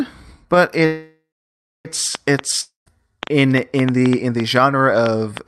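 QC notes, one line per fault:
0.85–1.87 s, call audio freeze: the last sound is stretched into a fading buzz, then about 0.6 s of silence. Playback resumes where it stopped, with the timeline now about 1 s late and nothing lost. Likely packets held up in transit and an emptied jitter buffer.
2.15 s to end of clip, train of clicks: uneven ticking, about 4.7 per second, peaking roughly 15 dB above the sound and audible in pauses too. Likely caused by pulses from nearby equipment or a faulty connection or power supply.
2.61–2.88 s, long network dropout: a short fading buzz is followed by about 0.15 s of silence. About 0.26 s of audio never returns, and the sound resumes further on. Likely a stretch of packets that never arrived.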